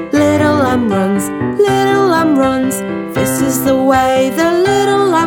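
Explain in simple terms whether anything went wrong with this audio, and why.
Nothing went wrong with this audio, because no fault can be heard anywhere in it.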